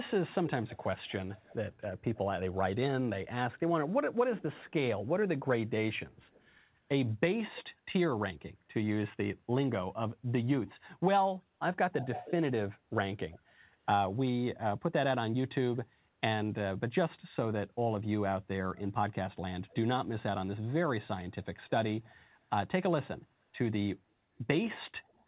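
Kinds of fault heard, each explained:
Echo leak: A delayed copy of the speech returns about 0.31 s behind it, drifting slightly later over the clip. It is likely loudspeaker sound that the far end's echo canceller missed. It is mostly faint, but much louder from 10.67 to 13.39 s.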